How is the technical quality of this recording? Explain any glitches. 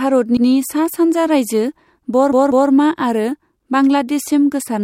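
The recording has two stutters from repeated frames. From 0.37 to 0.46 s, just before "सा सानजा राइजो", a 96 ms block plays twice. From 2.32 to 2.70 s, a 192 ms block plays three times, adding 384 ms. A spectrogram would show identical slices side by side.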